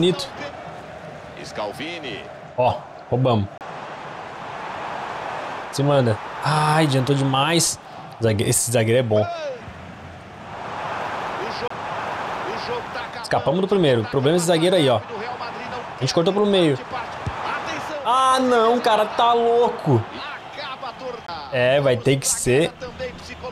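Three CD skips, at about 3.58 s, 11.68 s and 21.27 s, each a brief mute of a few tens of milliseconds, heard as a tick or short gap, before the audio jumps ahead or back by one or more disc turns.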